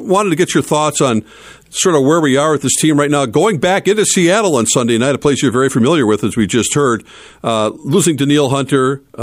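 No technical faults can be heard anywhere in the speech.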